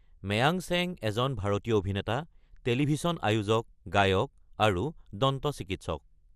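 From start to finish the speech sounds dull and gurgly, with a granular grit, likely MP2 compression at a low rate, around 80 kbps, switching off upper sub-bands.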